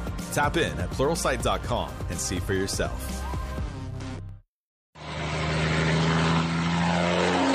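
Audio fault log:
4.29 s, repeated buffer: fresh audio arrived late, so the device replayed its last piece of roughly 1.45 ms, which fits a 64-sample buffer. That piece sounds twice with hard joins, heard as a brief click, and no audio appears to be lost.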